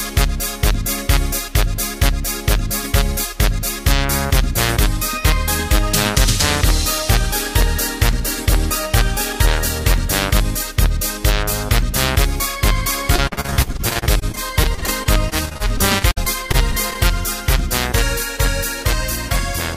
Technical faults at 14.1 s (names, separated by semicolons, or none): repeated packet loss (robotic sound)